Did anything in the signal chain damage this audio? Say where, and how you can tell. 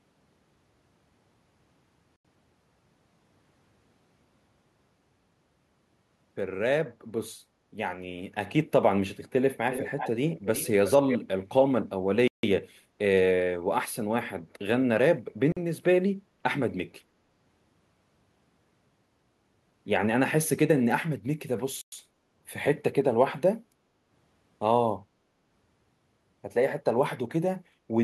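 Yes. At the wireless link to the playback device, the audio drops to dead silence four times: 2.16 to 2.25 s (85 ms), 12.28 to 12.43 s (155 ms), 15.52 to 15.57 s (46 ms) and 21.81 to 21.92 s (110 ms). Each is a clean hole, and the speech then resumes. That pattern points to a Bluetooth stall, likely caused by radio interference delaying packets until the headphones' buffer ran empty and playback paused for the retransmissions.

In the call processing, there is an echo leak: a second copy of the voice trails the speech by 347 ms in three bursts, at 9.71 to 10.11 s, 10.32 to 10.68 s and 10.86 to 11.19 s. It sits roughly 10, 15 and 5 dB below the main voice, so it fades then grows louder. The likely cause is a far end on loudspeaker whose echo canceller failed to strip its own playback from the microphone signal and sent it back.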